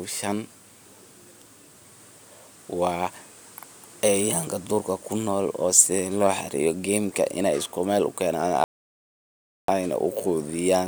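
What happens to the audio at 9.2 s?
At 9.2 s the speech sits inside a rebuffering stall from 8.64 to 9.68 s: playback ran dry, so about 1.04 s of flat-line silence appears on the waveform and a blank band on the spectrogram, then resumes exactly where it stopped.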